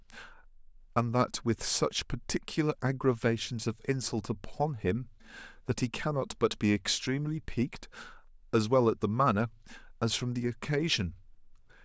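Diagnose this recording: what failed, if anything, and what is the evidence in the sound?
Nothing failed in this recording, and the sound gives no evidence of a fault at any stage.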